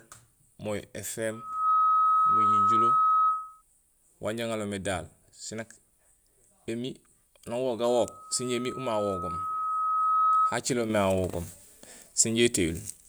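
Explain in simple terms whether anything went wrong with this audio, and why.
Two things go wrong here. First, there's loudspeaker feedback squeal: the mic is picking up its own speaker, and a single tone near 1.3 kHz feeds on itself. From 1.31 to 3.62 s it swells up within about half a second, and from 7.88 to 10.61 s it creeps up over roughly two seconds, ending up louder than the speech.

Second, at 10.90 s there's a sudden gain jump. The speech and the background noise step up together, noticeably louder, and stay that way to the end. That's most likely a volume setting applied all at once instead of being faded in.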